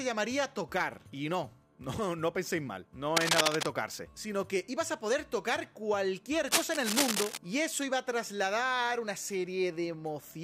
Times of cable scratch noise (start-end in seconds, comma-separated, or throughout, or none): 3.16-3.66, 6.47-7.37